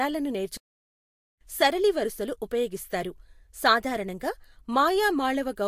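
At 0.57 s the speech cuts to silence for about 0.84 s, a playback stall, likely the player starving for data, resuming at "సరళి వరసలు ఉపయోగిస్తారు సాధారణంగా"; waveform and spectrogram show a flat, empty gap.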